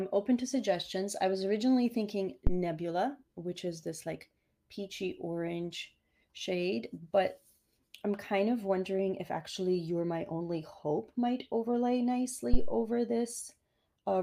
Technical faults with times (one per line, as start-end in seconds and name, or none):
2.47-2.61 phantom power thump
12.54-12.80 phantom power thump